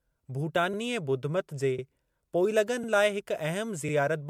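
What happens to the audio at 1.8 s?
Between 1.78 and 1.84 s there is an overlapping chunks fault. The audio is handled in 1 s chunks, and this one begins before the previous one finished. About 50 ms of sound plays twice, heard as a brief stutter or click at the join.

The same moment also carries the clip-wide smearing and swirl. Attacks are blurred and the tone sounds hollow. This is likely generation loss from decoding and re-encoding about three times with MP3 at around 96 kbit/s, each pass adding fresh quantisation damage.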